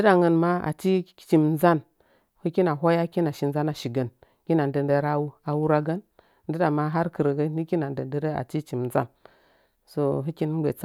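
In this speech clip, a tiny skip at 6.93 s, just after "nilɨɗa ma", drops a few milliseconds with no gap, likely audio missing between chunks as 2.5 s blocks are joined.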